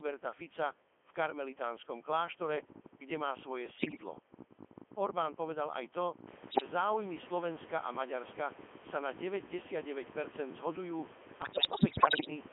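Throughout, the speech passes through a Codec 2 vocoder. Only pitch, voicing, level and spectral shape survive, rebuilt from sine waves. It sounds buzzy and robotic, band-limited to 250 Hz to 3.4 kHz, which fits the 3.2 kbit/s mode.

Bit errors on digital voice radio strike at 3.77 to 4.03 s, 6.50 to 6.70 s and 11.42 to 12.30 s. Corrupted frames send wrong pitch and level values, so the voice warbles and bleeps into gibberish. The errors run at a few percent. The background room noise rises by about 15 dB near 6.5 s.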